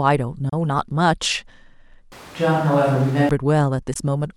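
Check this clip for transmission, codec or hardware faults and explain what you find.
Two kinds of fault are audible in this speech. At 0.49 s and 3.94 s the speech cuts to silence for a few tens of milliseconds, then resumes as if it had played on: likely a Bluetooth dropout, where one or two late packets were discarded. From 2.12 s to 3.29 s the speech turns roomy and hollow at a similar level, with background noise roughly 25 dB below it. The likely cause is a switch to a distant microphone after the close one's signal dropped out.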